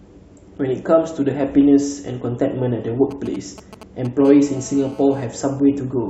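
A speech recording carries two kinds of interference from a nearby 2G handset. From 3.11 to 4.22 s there are GSM signalling bursts: a galloping dit-dit-dit of short 217 Hz buzzes, roughly 15 dB below the speech, as the phone exchanges control traffic and the audio circuit rectifies its radio pulses. A spectrogram shows clusters of vertical broadband stripes, and the waveform shows spiky packets. Then, from 4.25 to 5.26 s, a steady GSM phone buzz takes over, a hard, raspy 217 Hz tone about 24 dB below the speech, consistent with the handset transmitting in bursts 217 times a second during a call. It appears as an unbroken comb of harmonics spaced 217 Hz apart across the spectrogram, and as a regular train of short pulses riding on the waveform.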